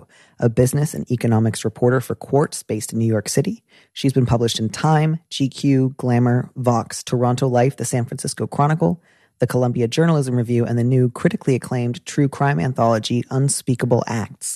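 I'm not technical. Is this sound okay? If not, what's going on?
Yes, the recording is technically sound, with nothing wrong in how the audio was captured or delivered.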